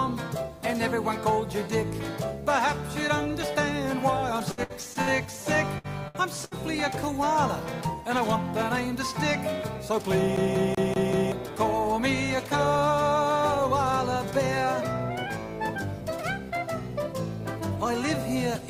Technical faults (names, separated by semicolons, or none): repeated packet loss (robotic sound); CD stuck on one turn; jitter buffer speed-up